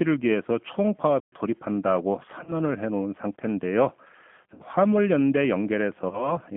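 Speech runs through the G.729 codec for the whole clip, and the damage is plainly audible: the line band sits at roughly 150 Hz to 3.4 kHz, so there is no air above that, and the voice has the slightly rough, synthetic grain of a low-rate model that rebuilds each short frame from a vocal tract filter, a pitch predictor and a handful of pulses at 8 kbit/s. Unlike plain band-limiting, the roughness lies in the texture of the voice itself, not only in the missing highs. At 1.2 s the audio simply stops for 120 ms and resumes at 1.32 s. This is a playback stall, likely the player running dry or its thread being held up. It differs from packet loss because the gap is true silence with no substitute sound filling it. At 2.44 s, 4.54 s and 6.09 s there are bursts of VoIP packet loss concealed by the speech codec. Here the decoder stretches its last pitch and filter into a buzzy tone or coloured noise that fades, rather than going quiet. 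The gaps last about 30 ms, 60 ms and 30 ms, which fits one, two and one lost packet. Because each frame builds on the one before, the voice stays weak or smeared after each gap, with recovery running to about 2.54 s, 4.63 s and 6.38 s. That lingering after-effect also separates concealment from the clean restart of the stall.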